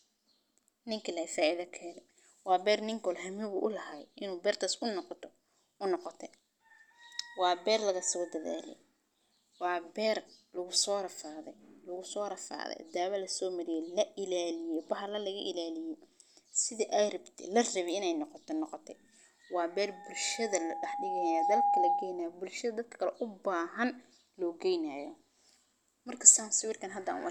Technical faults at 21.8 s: loudspeaker feedback squeal

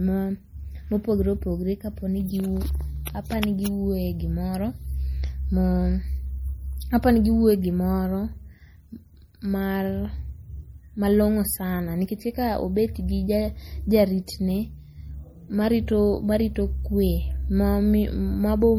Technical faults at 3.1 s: MP3 compression; pre-echo

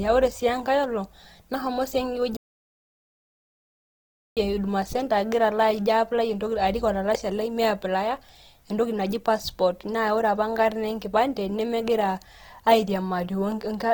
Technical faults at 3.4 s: Opus compression; playback stall

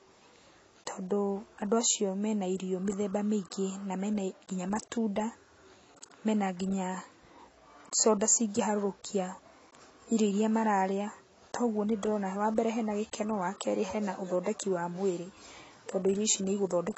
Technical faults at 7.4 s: AAC compression

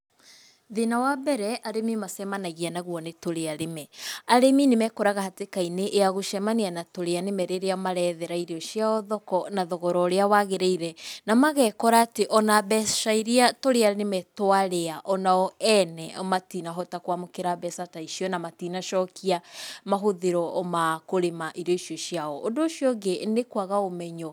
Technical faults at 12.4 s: pre-emphasis left on

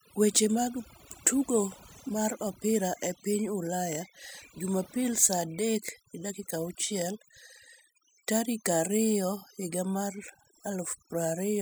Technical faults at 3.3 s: overdone noise removal

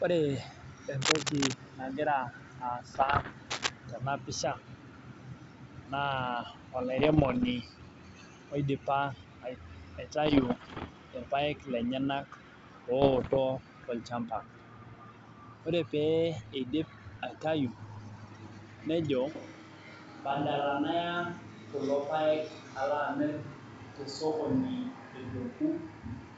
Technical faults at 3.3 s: bit errors on an ADPCM link

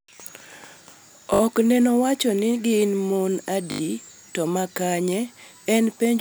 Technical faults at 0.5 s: none

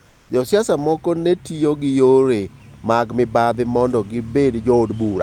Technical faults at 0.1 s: comfort noise in place of the background

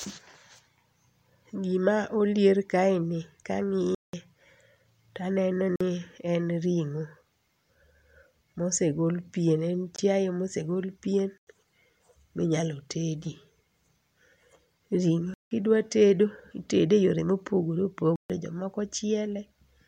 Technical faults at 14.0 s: none

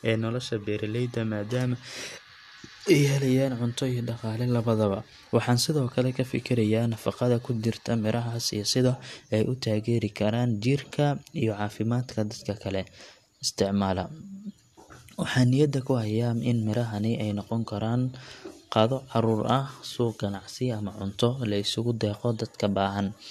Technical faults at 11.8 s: none

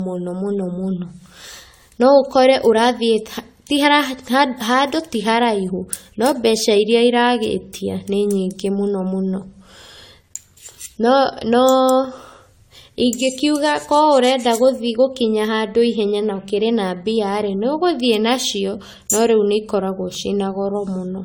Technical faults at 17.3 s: generation loss

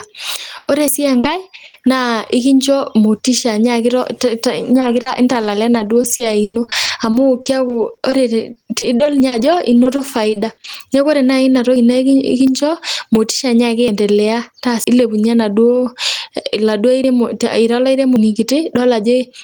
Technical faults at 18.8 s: gain pumping

